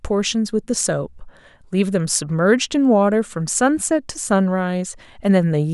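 A speech recording with nothing technically wrong that can be heard.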